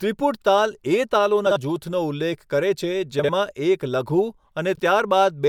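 Frames out of order at 1.46–1.57 s, 3.19–3.30 s (just after "કરે છે") and 4.75–4.80 s: neighbouring blocks of what fit 24 ms frames were swapped, making a garbled flutter.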